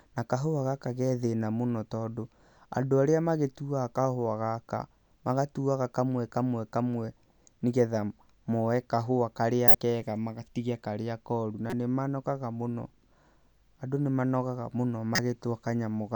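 Three short glitches cut through the speech: a loud one at 9.68 to 9.75 s peaking near -5 dBFS, a faint one at 11.70 to 11.73 s around -20 dBFS, and a moderate one at 15.15 to 15.19 s around -10 dBFS. Each is a corrupt frame decoded: flipped bits in the compressed data gave the decoder wrong gains or codes, placing energy at the wrong frequencies for roughly one or two frames' worth of time.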